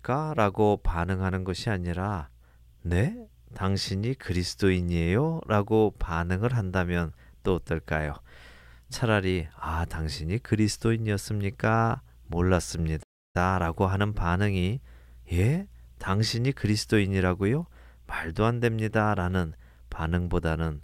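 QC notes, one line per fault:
13.02–13.36 s, playback stall: the speech cuts out abruptly mid-flow and the output drops to dead silence for roughly a third of a second, about 317 ms, before resuming. The likely cause is the player running short of buffered data or having its output thread blocked, so nothing reached the output until it recovered and carried on.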